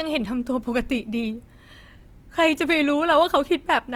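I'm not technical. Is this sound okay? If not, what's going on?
No. The speech sounds grainy and rough from start to finish, with a noisy edge. This is likely Opus compression. To save space, the encoder fills in fine detail with approximations. The full treble range is still there, but it sounds coarse.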